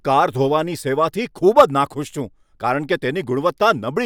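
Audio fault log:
Nothing to flag here: the speech comes through without any technical trouble worth logging.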